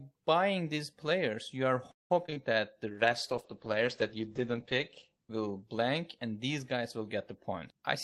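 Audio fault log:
1.91–2.38 s, repeated packet loss (robotic sound): across this half second the stream breaks up in what sounds like four separate holes, the longest about 187 ms. Each hole is patched by stretching the preceding sound, covering roughly half the span, and about 60 ms is simply missing. The result is choppy speech with pieces missing. On a spectrogram the stretches appear as smeared, repeated harmonic bands with a few blank slices. The waveform shows abrupt envelope breaks.
2.88–6.28 s, call bitrate drop: the encoder falls to a much coarser setting for about three and a half seconds, with the worst stretch lasting about 2.1 s. The sound points to a fall from around 32 kbps to about 11 kbps. The audio band narrows from 20 kHz to 8 kHz, so the speech turns muffled and watery. A spectrogram shows everything above 8 kHz cut away along a flat ceiling, with blotchy, quantised texture below it.
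7.61–7.78 s, jitter buffer speed-up: in this brief stretch the receiver drains an overfilled jitter buffer by cutting out short pitch-period chunks, around 70 ms in all. The speech plays at 133% speed with its pitch unchanged, so it sounds briefly hurried. On the waveform the periodic cycles keep their spacing, with small seams where pieces were removed. On a spectrogram the formant movements are compressed in time while the harmonic spacing stays the same.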